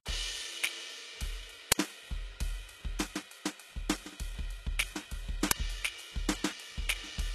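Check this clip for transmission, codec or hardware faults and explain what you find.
There are two problems in this music clip: a codec sound that runs the whole way through, and two very short bursts of garbage noise.

From start to finish the top end sounds synthetic. The treble is there, but it has a gritty, metallic sheen, and nothing survives above about 12.3 kHz. That points to HE-AAC compression, likely at a very low rate of around 16 kbps. That codec keeps only the lower spectrum and fakes the highs by copying lower bands upward under a rough envelope. Harmonics don't line up across the join, so cymbal-type content turns brittle.

At 1.72 s and again at 5.51 s there's a sudden, loud crack of digital noise. They sound like an uninitialised buffer: a block of audio went out before anything was written into it, so whatever was left in memory got played as samples. The first burst lasts about 5.8 ms, which fits a 256-sample block. 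The second lasts 2.9 ms, which fits a 128-sample block. Both are too short to hear as anything but a harsh click.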